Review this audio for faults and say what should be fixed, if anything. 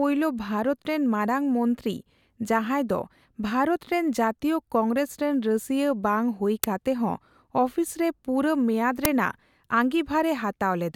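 Two uninitialised buffer bursts interrupt the speech, at 6.64 s and 9.05 s, each lasting about 5 ms, which fits a 256-sample buffer. A block was sent to the output before any audio was written into it, so whatever stale memory it held played as loud digital noise. On a waveform each shows as a dense slab of samples; on a spectrogram, a thin vertical stripe spanning the whole frequency range. To prevent it, zero-fill every buffer on allocation and never release one to playback until the producer has written it.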